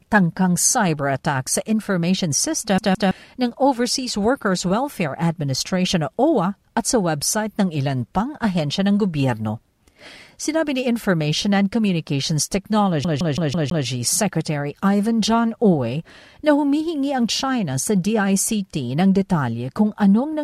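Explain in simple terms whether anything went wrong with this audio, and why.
CD stuck on one turn, at 2.78 to 3.11 s and again at 13.04 to 13.86 s. A scratch keeps knocking the laser back one track at the same point on each spin, so the same 0.16 s of speech plays over and over, with a tiny silent gap at every jump. The first stutter repeats twice and the second five times, giving the quick, even ticking sound of a skipping CD.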